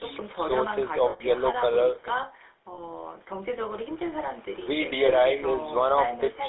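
Speech heard through the GSM full-rate codec throughout, with a plainly audible buzzy, gravelly roughness that fits a 13 kbit/s GSM coder. A spectrogram shows energy confined to roughly 300 Hz to 3.6 kHz, with a coarse, smeared harmonic texture instead of clean voice partials. Lost GSM frames occur at 1.1 to 1.21 s, 2.74 to 2.79 s and 5.06 to 5.11 s, covering about 100, 40 and 20 ms. In each gap the decoder repeats the last good frame's settings, so the sound holds as a rough, metallic ring. On a spectrogram each gap appears as a frozen, flat block of repeated spectrum. In the waveform it shows as a steady, repetitive stretch, the longest being the gap at 1.1 s.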